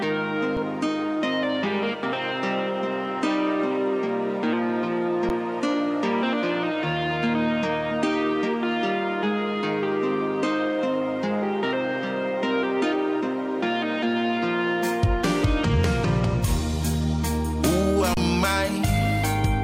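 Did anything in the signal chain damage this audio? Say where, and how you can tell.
Yes. The damage is at the driver or buffer stage: an underrun with held sample, occurring three times, at 0.57 s (about 4 ms), 5.29 s (10 ms) and 18.14 to 18.17 s (30 ms). Each time the output buffer ran empty and the converter held its last sample, so the waveform goes flat and the sound stops abruptly. Roughly the same span of audio was lost, so each time the signal resumes further along rather than where it stopped.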